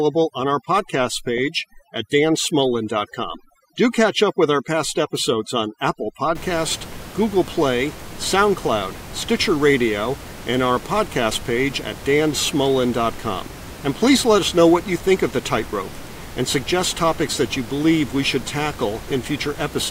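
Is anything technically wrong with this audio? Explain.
Yes. From the start to 6.35 s there is overdone noise removal: a noise reducer set far too aggressively suppresses any frequency band sitting near its noise estimate, taking quiet parts of the speech along with the room noise, which sits about 16 dB below the speech. The background drops and breaks up into twinkling specks.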